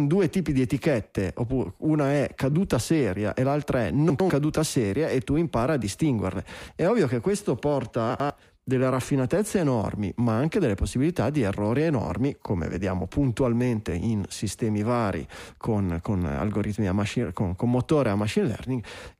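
A speech recording with chunks out of order at 4.1 to 4.3 s and again at 8.1 to 8.3 s. In each case a 100 ms block of audio was delivered or written one chunk late, so it plays after the block that should have followed it. No audio is missing, but those two tenths of a second come out swapped. Each spot sounds like a brief jumbled moment, with three hard joins.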